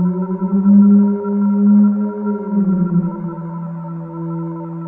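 Throughout, the top sounds dulled with a faint metallic shimmer. This is imaging from linear upsampling from 22 kHz to 48 kHz, which leaves very weak mirror images between 11 and 22 kHz.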